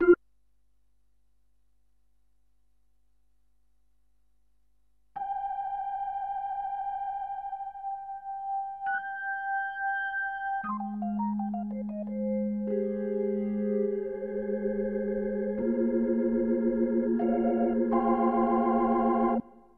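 No technical faults are audible.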